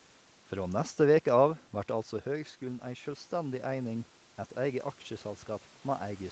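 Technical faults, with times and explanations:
1.88–4.88 s, automatic gain rising: after "neste veke av" the input fell by about 9 dB as the talker moved back around 2 s, and the gain control slowly added about 4 dB over three seconds, so voice and room noise swell together.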